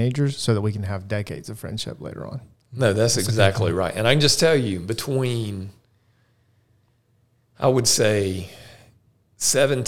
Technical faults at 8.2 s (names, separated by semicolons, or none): none